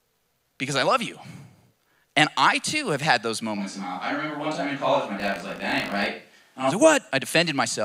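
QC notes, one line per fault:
3.59–6.69 s, switch to a distant microphone: after "too have had those" the speech turns roomy, hollow and thinner, about 5 dB quieter with more audible room noise, likely from losing the close microphone.
5.18–6.06 s, buffer tearing: a 50 Hz robotic buzz under the speech, as a small slice of each buffer replays audio roughly 70 ms old with hard joins.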